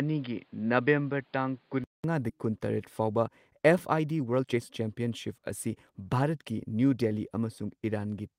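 From 0.0 to 2.04 s the speech sounds dull and boxy, with nothing above 5.1 kHz and a fresh noise floor around 35 dB down. A 200 ms silence marks the switch back, and level stays about the same. This is likely an input switched to a poorer device.

At 2.29 to 2.31 s playback jumps straight ahead with no gap, skipping roughly a second of speech. This skip ahead came from dropped audio while later audio was already waiting.

From 3.00 to 6.40 s the speech runs hurried at 112% speed without any pitch change. This jitter buffer speed-up trimmed around 400 ms of short pitch-period pieces to reduce excess delay.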